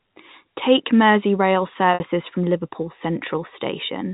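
At 1.94 s, about 60 ms of audio packets were lost until 2.00 s, consistent with three 20 ms packets. Packet loss with pitch repetition bridges the gap: the receiver repeats the last pitch period, which sounds briefly held and buzzy before fading down. The G.711 telephone coding keeps the sound band-limited below 4 kHz.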